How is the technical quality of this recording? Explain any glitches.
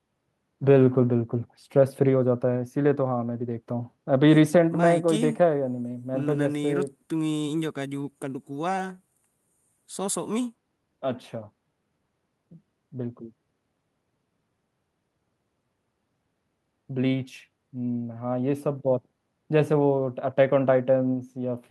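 The technical quality holds up, with no glitches to explain, only the ordinary character of speech carried over a call connection.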